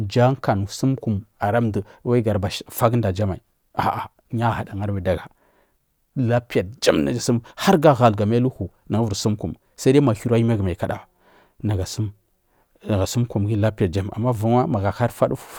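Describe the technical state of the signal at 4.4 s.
The signal at 4.4 s is intact, with no technical fault present at that moment.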